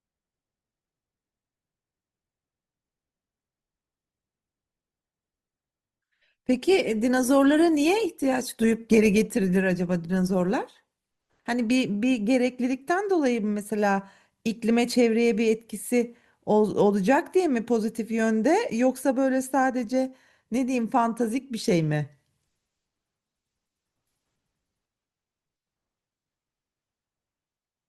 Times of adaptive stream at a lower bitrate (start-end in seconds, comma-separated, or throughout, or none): 4.94-10.94